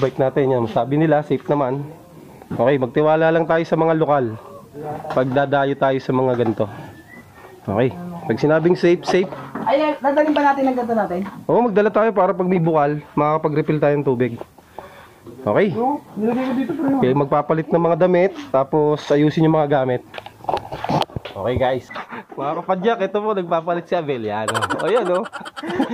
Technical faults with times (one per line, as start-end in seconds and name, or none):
16.93 compressed frames skipped